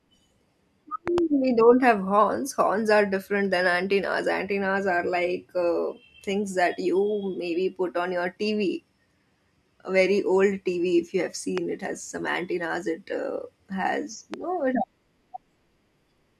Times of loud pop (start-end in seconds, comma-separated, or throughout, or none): 1.08-1.20, 11.58-11.60, 14.34-14.36